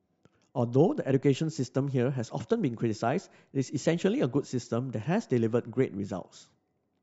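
No technical faults can be heard at any point in the speech. Nothing in the signal stands out as a problem at any moment.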